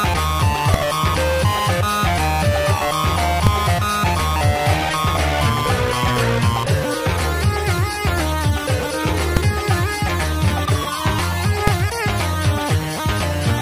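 Four sharp bangs land at 0.74, 3.47, 9.37 and 11.67 seconds. Each is invalid numbers at full scale: a calculation blew up to infinite or invalid values that got pinned at maximum level for a block of about 2.9 ms, which fits a 128-sample buffer. That block is too short to hear a gap, so each one comes through as a single loud bang.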